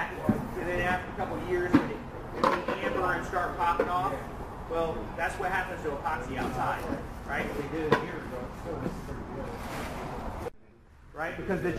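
No technical faults are audible.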